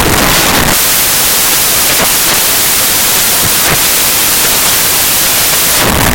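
From start to end, the reader assembles each sample from the wrong bytes, misaligned or in swapped order, so the rapidly varying low bits land in the most significant positions. The speech is heard as loud, harsh noise, close to white on the louder passages.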